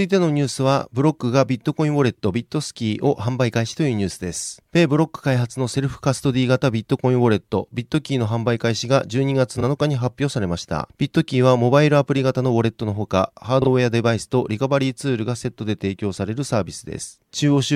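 Around 2.15 s, 9.57 s and 13.62 s the speech has a frames out of order fault, each lasting roughly 40 to 55 ms. Two neighbouring chunks, consistent with single 23 ms frames, play swapped, giving a brief garbled flutter. No time goes missing.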